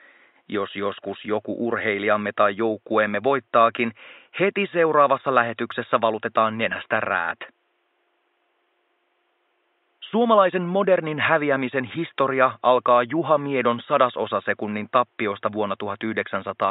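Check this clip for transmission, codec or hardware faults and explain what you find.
No transmission, codec or hardware faults can be heard anywhere in the audio, and the signal's technical condition gives nothing to report.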